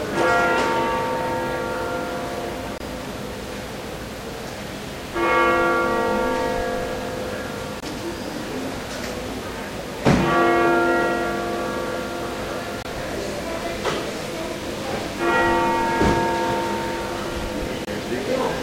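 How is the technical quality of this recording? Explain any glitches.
The recording of everyday sound has one recurring glitch, a gap between chunks, at 2.78, 7.80, 12.83 and 17.85 s. Each is a silent hole of about 23 ms, spaced about 5 s apart, where the audio was split into chunks and silence was inserted at each join. Unlike a dropout, no sound goes missing; it simply pauses and resumes at a strictly regular interval.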